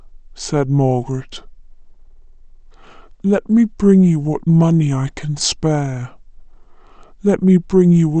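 The speech here is slow and dropped in pitch from start to finish: classic wrong sample rate. Everything runs at about 0.73 times normal speed and sits roughly 5.5 semitones low, so speech sounds heavy, drawn out and a bit sleepy. Speed and pitch move together by the same ratio, which fits audio captured at 44.1 kHz being played back at 32 kHz without any rate conversion.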